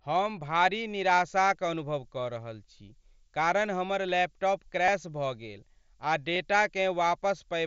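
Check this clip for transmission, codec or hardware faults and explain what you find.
Two kinds of fault are present: a switching supply whistle and two concealed Bluetooth headset packet losses. The speech runs through the wideband mSBC headset path, which adds its light grainy texture on louder sounds.

Switching supply whistle, from 1.02 s to the end of the clip: a thin high whistle sits over the speech, wandering between about 8.0 and 10.4 kHz and centring near 10 kHz. It sits roughly 20 dB below the speech. The mechanism is a switching regulator cycling at an audible rate. Its frequency shifts as the current demand changes, which is why the pitch moves instead of holding steady.

Concealed Bluetooth headset packet loss, at 4.86 to 4.88 s and at 6.34 s: the first gap lasts about 22.5 ms, which fits three lost headset frames. The second is about 15 ms, which fits two. In each case voice packets failed to arrive, and the receiver filled the hole by repeating the closest-matching piece of the preceding waveform. 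Because each gap spans several frames, the patch is not hidden. It comes through as a brief buzzy smear at steady level, then a slight warble as real audio resumes.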